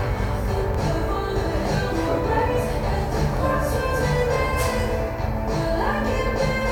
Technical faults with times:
0.74-0.78 Bluetooth stutter
3.37-3.41 Bluetooth stutter

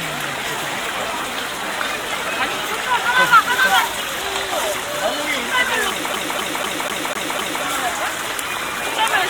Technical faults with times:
6.13-7.63 CD stuck on one turn

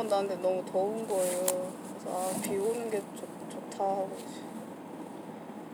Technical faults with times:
none

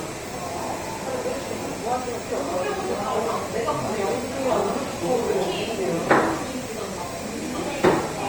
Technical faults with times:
0.00-8.29 Opus compression

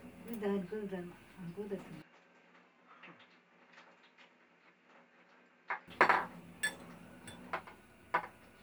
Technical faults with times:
2.02-5.88 input switched to a poorer device

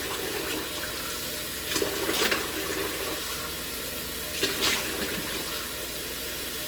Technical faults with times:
0.00-6.67 Opus compression
0.80-1.00 chunks out of order
3.70-3.90 chunks out of order

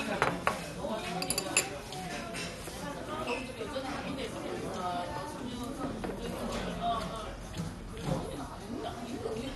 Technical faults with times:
0.00-9.55 MP2 compression

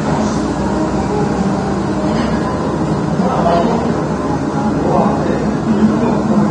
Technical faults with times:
0.00-6.51 AAC compression

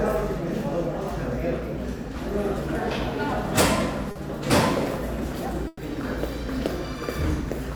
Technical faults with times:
4.11-4.17 short concealed packet loss
5.67-5.81 burst of packet loss

